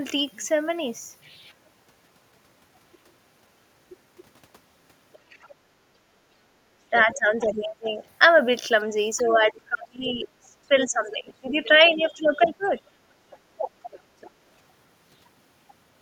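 Other side's voice leaking through appears first from 5.13 to 5.49 s as a faint second voice about 35 dB under the speech. The likely cause is the talker's loudspeaker reaching the microphone and the echo canceller leaving a residue. Speech suppressed in double talk follows at 5.63 to 5.67 s, a brief dip of around 20 dB. The likely cause is the canceller mistaking overlapping talk for echo and attenuating it.

The pattern repeats. From 6.91 to 8.0 s the speech is suppressed again by up to about 20 dB for roughly a second, while the far voice leaks through from 7.14 to 8.05 s at about 20 dB below the speech. Leakage at a similar level returns from 9.17 to 10.11 s. The longest suppression runs from 9.22 to 13.89 s, with the talker dipping by up to about 25 dB for around three seconds in total, which is likely the canceller clamping down whenever both sides talk. Over that stretch, from 11.12 to 14.31 s, the other side's voice is audible at about 25 dB under the speech.

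Background gated by the echo canceller occurs from 13.07 to 13.52 s. For about 0.4 s the room sound drops by up to about 13 dB, because the canceller pulled the microphone down hard while the loudspeaker was active. The ambience then returns once it releases.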